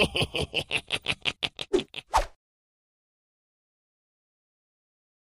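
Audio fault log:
0.38 to 1.85 s, Bluetooth SBC bit pool drop: the top end goes dull and a gritty grain creeps in, which fits the link squeezing the bit pool from 31 to about 13, near 94 kbps, starving the upper sub-bands and coarsening the rest until it recovers.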